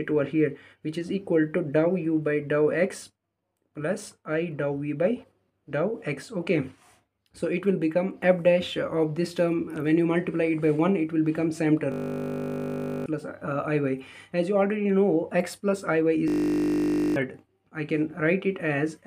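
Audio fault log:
11.92–13.06 s and 16.28–17.16 s, system hang loop: the playback froze while the audio hardware kept replaying one 20 ms stretch of its ring buffer, 57 and 44 times in a row, so about a second of the real sound is lost each time. The loop is so short that it fuses into a steady 50 Hz buzz rather than a machine-gun stutter. Because it is an exact, unchanging repeat, it is a hang loop and not a dropout or noisy glitch.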